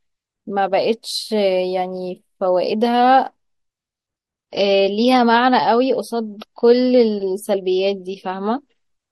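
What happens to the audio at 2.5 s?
Nothing goes wrong at 2.5 s; the speech carries on intact through that moment, with no dropout, click or other fault to be heard.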